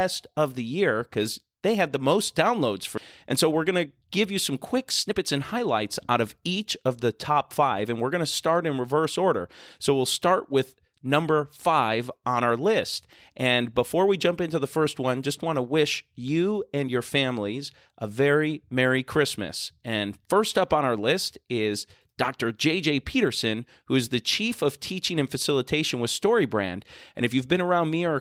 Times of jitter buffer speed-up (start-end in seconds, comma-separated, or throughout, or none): 3.33-5.57, 6.83-8.11